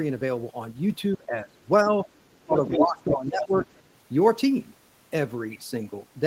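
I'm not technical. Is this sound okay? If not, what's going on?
No. Speech suppressed in double talk happens from 1.17 to 1.56 s and again from 2.46 to 3.53 s, where the talker's voice dips in level. This is likely because the other person was heard on the loudspeaker at the same moment, and the echo-removal system turned everything down rather than separating the two voices.

The other side's voice leaking through is audible from 2.57 to 2.85 s, at roughly the same loudness as the talker. It returns more quietly from 3.02 to 3.15 s and from 3.43 to 3.82 s. The likely cause is that sound from the device's loudspeaker reached the microphone and wasn't fully removed.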